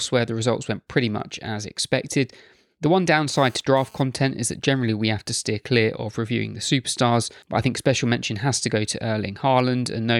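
From 3.33 to 4.02 s, just before "is that generally we", a GSM phone buzz cuts in: a raspy, harmonic-rich rasp at 217 Hz, about 29 dB below the speech. It comes and goes because the phone is transferring data, and its pitch and gating set it apart from mains hum.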